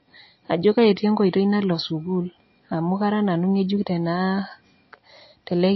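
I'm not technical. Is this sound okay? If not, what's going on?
No. The whole clip sounds dull and watery, as if heard through a wall. Nothing above about 5.8 kHz survives, so s sounds lose their crispness. This is likely MP3 compression squeezed too hard. It throws away the treble to save space.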